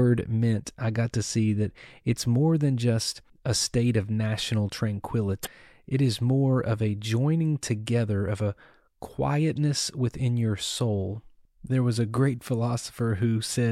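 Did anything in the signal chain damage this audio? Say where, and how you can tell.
Yes. Damaged data in a compressed stream hit the codec stage. At 5.42 to 5.47 s the speech breaks into a brief glitch lasting about 46 ms. Corrupted bytes made the decoder misread those frames. It lost sync and hunted for the next valid frame header.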